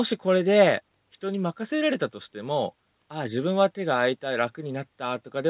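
No technical faults can be heard in this speech.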